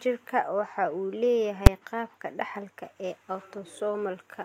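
At 1.67 s, just before "qaabka dhaxalka ee", the speech is hit by one sharp bang: invalid numbers at full scale. A calculation went to infinite or undefined values, which were clamped to the maximum sample level for a single processing block of about 5.8 ms, which fits a 256-sample block. On the waveform this is a thin slab sitting flat at one extreme, far beyond the speech peaks. On the spectrogram it is a bright vertical stripe spanning all frequencies.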